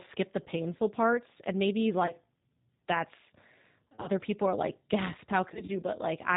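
Right from the start the whole speech clip has that G.729 sound: everything above 4 kHz is gone, and the voice comes out slightly rough and synthetic, the way an 8 kbit/s coder sounds when it rebuilds speech from a vocal tract filter, a pitch estimate and a few pulses per frame.

On top of that there's VoIP packet loss concealed by the speech codec. The decoder fills the gaps by stretching its last pitch and filter into a fading buzz, and the voice stays weak for a moment afterwards. There's a short one at 0.44 to 0.46 s, just before "parts and maybe". Another comes at 2.06 to 2.13 s. Then a scattered burst runs from 3.88 to 4.07 s right before "people are like gasp", and a similar smeared stretch follows from 5.54 to 5.72 s just after it.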